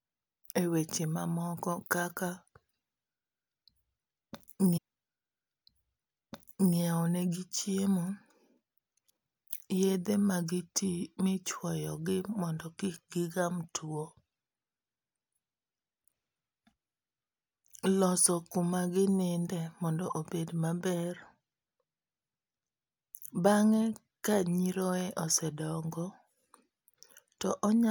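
Stream segment repeated, 4.76 to 6.76 s: the player queued the same stretch of the stream twice, so about 2.0 s of speech plays a second time. A small blip marks the jump back before the passage repeats and the programme continues.

Channel delay (comb filtering), from 12.42 s to the end: one channel arrives late by roughly a single sample, about 0.02 ms, and the two are summed to mono. The first cancellation notch lands near 20 kHz, so the speech loses some top-end air and sounds slightly dulled.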